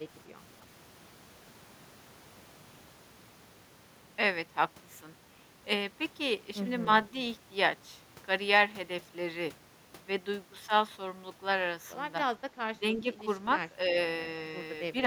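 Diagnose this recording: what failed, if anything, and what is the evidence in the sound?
Call processing failed: the echo canceller likely could not separate this talker from loudspeaker echo while both sides spoke, so it attenuated everything. The result is speech suppressed in double talk, dipping about 10 dB from 12.79 to 13.06 s and about 5 dB from 13.86 to 13.96 s.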